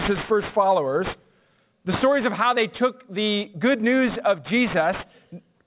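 Aliasing runs through the whole clip. The sound was taken down to a low rate, which fits 8 kHz, without a filter first. Content above 4 kHz folds back into the band as false pitches, about 15 dB below the signal. High sounds turn gritty and metallic.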